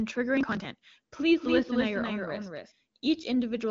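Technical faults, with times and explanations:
0.37 to 0.83 s, processor overload crackle: the processor repeatedly failed to fill its audio buffers on time, which fits buffers of roughly 10 ms, with around thirty skipped. Each skip leaves a hard-edged gap, and together they form a gritty crackle over the sound.
1.35 to 2.71 s, doubled audio track: a second, full-band copy of the sound runs about 200 ms behind the original and about 5 dB quieter, likely from a slower capture path mixing the same audio in twice. The copy has no decay or room colour, and it starts and stops abruptly.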